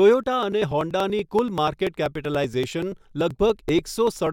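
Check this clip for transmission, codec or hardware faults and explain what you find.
The clip shows periodic USB or driver dropouts, running from 0.14 s to 4.27 s and repeating every 96 ms, around forty in all. Something is stalling the USB link or audio driver on a fixed schedule, and each stall loses a few milliseconds of audio, which is skipped rather than filled with silence. The speech is cut by evenly spaced ticks that form a steady rapid clicking over the speech.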